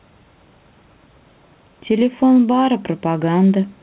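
Right through the speech there's gain pumping. The level ducks by roughly 5 dB each time a loud syllable lands, so the whole thing sounds squashed and breathing. That's likely the mic gain set far too high, with a fast limiter yanking it back down on every peak. Nothing comes through above 4 kHz, which fits a narrowband telephone codec on the call path.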